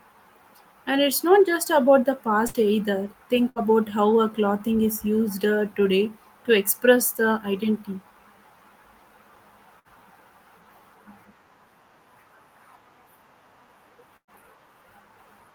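Four bursts of packet loss interrupt the speech, at 2.47–2.56 s (just after "not just about the"), 3.49–3.66 s, 9.79–9.88 s and 14.17–14.31 s. In the first three, roughly 60 ms of audio never arrived, and the receiver stretched the last sound for 54–64 ms as a fading buzz or hiss before playback resumed further along. The final burst loses about 120 ms: concealment fills 110 ms, about 80 ms of which has decayed to silence.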